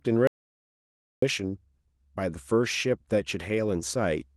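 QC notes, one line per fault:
0.27–1.22 s: audio dropout to silence. The speech stops abruptly at 0.27 s and resumes mid-flow at 1.22 s, leaving a gap of 0.95 s that is plain silence, with no room tone or noise floor beneath it. That dead-flat silence points to the input signal being lost, likely through a disconnected device, a failed link or a stray mute, while the recorder kept writing silence. Whatever was spoken during the gap is unrecoverable.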